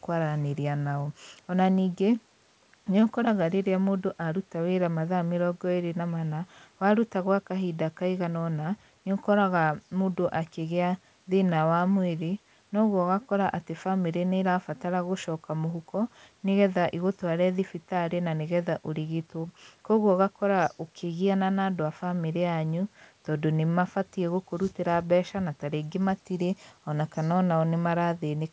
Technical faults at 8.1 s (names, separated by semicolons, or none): none